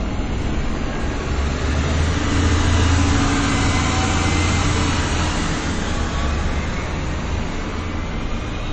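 From start to finish the top end just stops at about 8.3 kHz, and the sound has that watery, smeared quality you get from a heavily squeezed MP3. The likely story is low-bitrate audio saved at a high bitrate: something around 32 kbit/s re-encoded at a generous rate like 192 kbit/s. The bigger file can't bring back what the first pass threw away, so the cut-off and swirly artefacts ride straight through.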